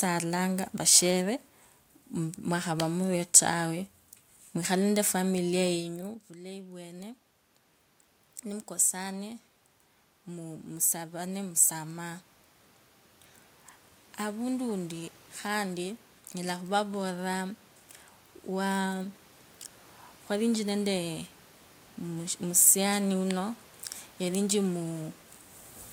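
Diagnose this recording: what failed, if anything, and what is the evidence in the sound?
Automatic gain rising in the call-processing stage: once the talker moved away at about 5.5 s and the input fell about 17 dB, the gain control climbed about 16 dB from 5.76 s to 25.2 s, slowly swelling voice and room noise together.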